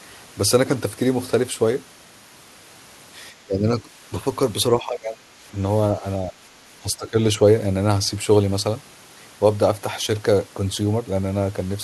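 Speech with five short level dips, at 3.45–3.66, 3.82–3.89, 4.75–5.31, 6.24–6.42 and 6.83–7.17 s, the deepest (around 25 dB) near 5 s. Likely speech suppressed in double talk: the voice is turned down while the far side's sound plays on the loudspeaker.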